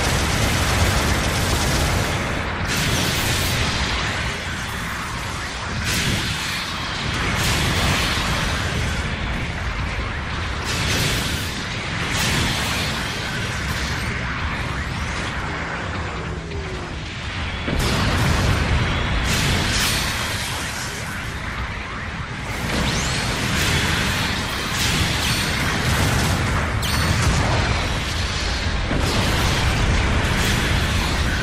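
Overlap between stream segments causes tiny skips at 3.45, 5.44, 7.44, 13.41 and 15.40 s. The timestamps of neighbouring segments overlap, so the player discards the overlapping stretch even though that sound was never duplicated. Roughly 10 to 16 ms vanish each time, and the waveform jumps across the gap, producing a tiny skip or tick. The spacing in multiples of about 2 s between events fits a 2-second segment length.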